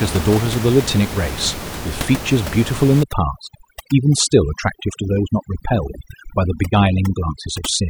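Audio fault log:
3.03 to 7.89 s, overdone noise removal: from 3.03 s onward, the room noise, which earlier sits about 10 dB below the speech, drops and breaks up into twinkling specks. The noise reduction is set too hard, so single frequency bands near its noise estimate are pushed down or off, taking quiet parts of the speech with them. A noise gate would instead cut the whole signal at once, without this scattered, band-by-band sparkle.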